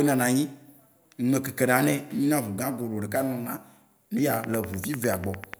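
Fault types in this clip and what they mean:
Train of clicks: a burst of short, near-identical pops riding on top of the speech, arriving at a steady 10 per second from about 4.34 s to 5.55 s, so you get around fifteen of them in that last stretch. They're hard to miss, peaking roughly 10 dB above the speech itself. The even spacing points to something periodic, likely electrical interference from nearby gear or a faulty connection or power supply.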